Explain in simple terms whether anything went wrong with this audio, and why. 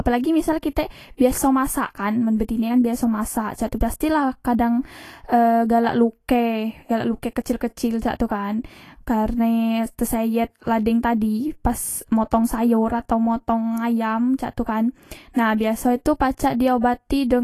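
Yes, two things. The whole speech clip sounds hissy and grainy, with nothing above 14.2 kHz: likely Vorbis compression squeezing the sound too hard. At 1.17 s, between "misal kitek" and "biaso masak kan men", a brief hiss smears in before a sharp sound. That's pre-echo, where compression noise spills about 36 ms ahead.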